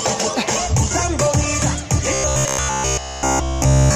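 From 2.14 s to the end of the clip, the sound turns into a rigid, metallic buzz near 66.7 Hz: robotic sound from repeated short buffers. Essentially every stretch is a repeat, likely from a 15 ms chunk being looped while fresh audio failed to arrive.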